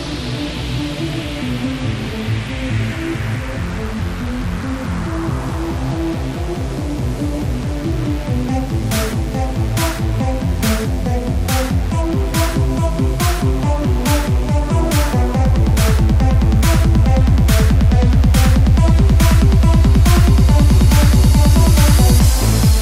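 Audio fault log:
throughout: mains buzz. Interference from the 50 Hz supply is leaking into the signal path, most likely through a dimmer, rectifier or poorly shielded cable, which injects a sharp spike twice in each mains cycle. Those repeating spikes form a dense series of 50 Hz harmonics that extends up into the kHz range, so the sound carries a steady, raspy buzz rather than a smooth hum, sitting roughly 30 dB below the wanted signal for the full length of the clip.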